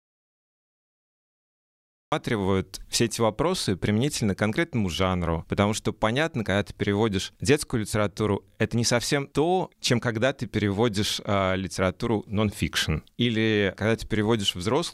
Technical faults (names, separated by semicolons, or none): audio dropout to silence